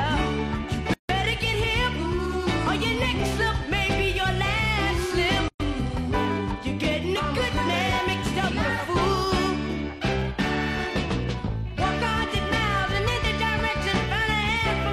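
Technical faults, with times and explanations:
0.94 s and 5.48 s: gap at a join of encoded pieces. Sound stops for about 160 ms, then 120 ms, and resumes where it stopped. Untrimmed encoder delay and end padding left silence at each splice.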